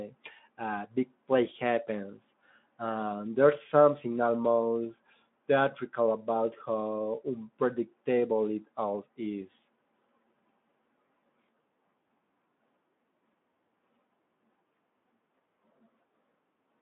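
No technical faults can be heard in this speech. The Speex codec is working as expected: the sound sits in a telephone-like band from 150 Hz to 3.6 kHz with nothing above 3.8 kHz, and the light coding texture fits a setting around 15 kbps.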